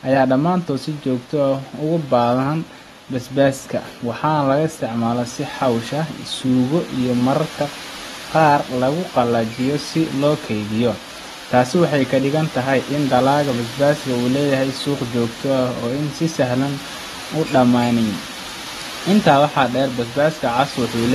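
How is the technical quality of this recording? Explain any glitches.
The recording is compromised throughout by clearly audible AAC compression artefacts, most likely from AAC-LC encoding. The encoder worked with too few bits per frame, so it discarded spectral detail its hearing model judged least noticeable and cut everything above 12.4 kHz. The result, from start to finish, is speech that sounds dull and smeared, with a watery, warbling texture on sustained sounds and fizz on sibilants. The damage points to a low bitrate, around 32 kbps.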